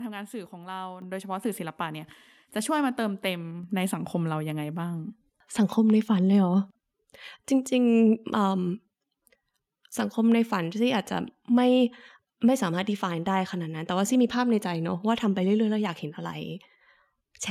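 At 1.02 s the microphone volume steps up. The call software judged the input too quiet and raised the device's input gain in one jump of about 7 dB. The speech and the background noise both get louder at once, mid-stream, with no fade.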